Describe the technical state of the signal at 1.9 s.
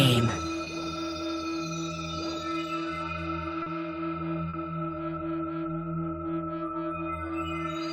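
No technical fault is present at 1.9 s, and the signal is intact at that moment.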